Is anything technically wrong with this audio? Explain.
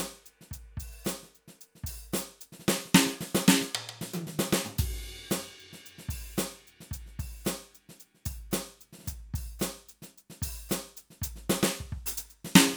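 No, nothing is technically wrong with this music.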